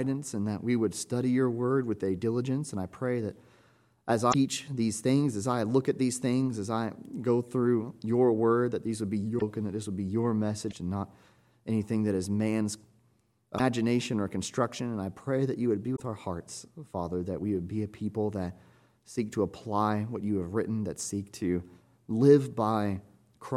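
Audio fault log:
4.30–4.35 s, 9.37–9.42 s, 10.67–10.73 s, 13.55–13.60 s and 15.95–16.01 s: damaged data in a compressed stream. Each event is a brief chirp, squawk, click or short hole of about 55 ms, where corrupted bytes make the decoder misread frames and lose sync until it finds the next valid frame header.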